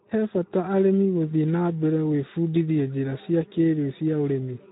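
Speex codec damage runs through the whole clip. The speech is coded by a low-rate CELP scheme, which fits about 11 kbps, leaving too few bits to describe the excitation, so the speech sounds plainly hoarse and noisy, and nothing remains above 3.8 kHz.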